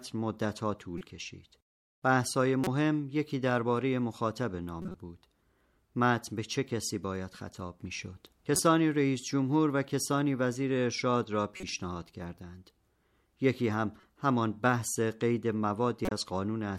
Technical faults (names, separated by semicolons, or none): corrupt frame decoded